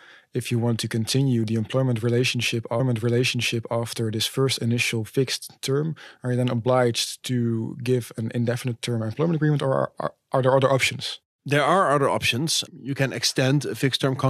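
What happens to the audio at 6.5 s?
Nothing goes wrong at 6.5 s; the speech carries on there without any audible fault.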